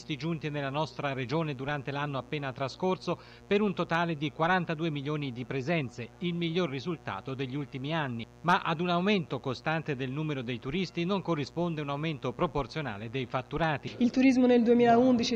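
A raspy mains buzz at 60 Hz runs throughout, sitting roughly 25 dB below the signal. Unlike smooth hum, switching spikes spread harmonics into several kilohertz.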